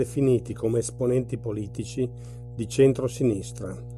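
A ground loop or nearby transformer is feeding the 60 Hz power line into the signal, laying a steady, fairly prominent mains hum under the speech throughout.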